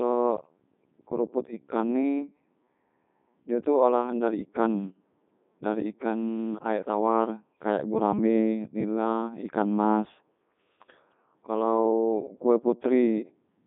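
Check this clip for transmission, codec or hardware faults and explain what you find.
There is one fault, present for the whole clip. Codec 2 vocoder: the speech is rebuilt from sine waves using only pitch, voicing and envelope, leaving it robotic and buzzy within 150 Hz to 3.7 kHz, which fits its 3.2 kbit/s mode.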